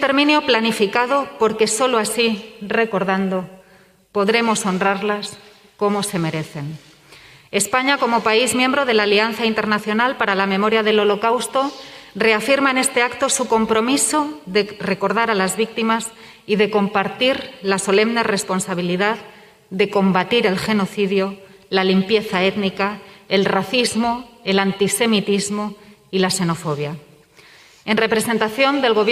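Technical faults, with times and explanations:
Nothing technical jumps out here; every moment of the audio sounds just as it should.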